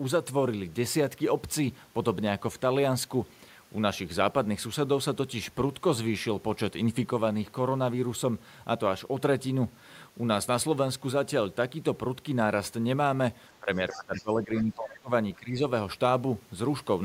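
A speech recording in which the talker's level sinks sharply from 13.61 to 15.11 s and again, more shallowly, from 15.39 to 15.62 s. This is speech suppressed in double talk, likely an echo canceller ducking the near voice while the far side spoke. On a waveform the envelope visibly collapses, and on a spectrogram the energy thins out. Inside the first dip, the other side's voice is leaking through in two brief scraps, at 13.91 to 13.99 s and 14.17 to 14.23 s. Both sit well below the talker's level and likely come from residual loudspeaker echo the canceller missed. On a spectrogram they show as faint, short harmonic smudges that do not line up with the talker's own patterns.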